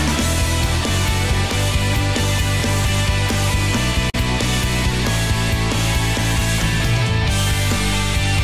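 Nothing stood out on listening to the audio.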